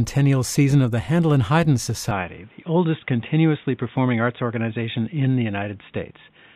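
At 2.11 s the speech abruptly loses its top end and stays that way to the end of the clip. Nothing remains above about 3.8 kHz, so consonants soften and the tone turns dull and boxy. The change happens with no gap and little shift in loudness, but a faint new noise floor, about 40 dB below the speech, comes in with it. This is likely an input switched to a poorer device, such as a headset's narrowband call profile.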